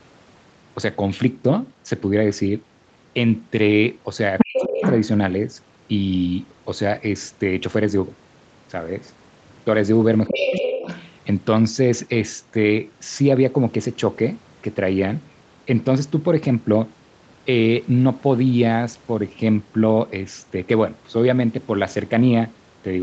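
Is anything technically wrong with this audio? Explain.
Yes. Twice a second voice comes through, and each time the main talker's speech is pushed down.

From 4.38 to 5.06 s and again from 10.27 to 11.06 s, the other side's voice is leaking through. It is about as loud as the talker the first time and a little quieter the second. The likely cause is a loudspeaker feeding the microphone, with the echo canceller leaving a residue. Unlike room reverberation or the talker's own echo, this is a different voice arriving on its own.

Over the same stretches, 4.45 to 4.82 s and 10.3 to 10.77 s, there is speech suppressed in double talk. With both sides talking at once, the processing likely turned the talker down along with the echo. Each time, under half a second is affected. The first dip goes nearly to silence and the second is a moderate dip. A network dropout would strike at random. These dips happen only while the intruding voice is present, which marks them as suppression.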